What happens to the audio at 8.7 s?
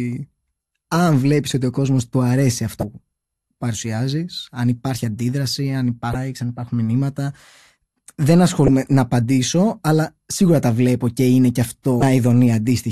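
Damaged data in a compressed stream from 8.65 to 8.68 s: the decoder misreads corrupted frames and resyncs, producing a brief glitch just before "να απαντήσω αλλά σίγουρα".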